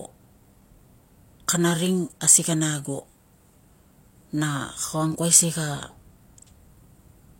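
At 4.52 s a single bit error spike cuts through the speech as one sharp, dry tick. One bit in a single sample was flipped in storage or on a digital link, so that sample's value jumped by a power of two and fell straight back. Unlike a dropout or splice click, nothing goes missing and the waveform shows no gap or step. It is one isolated full-band spike with no relation to the speech around it.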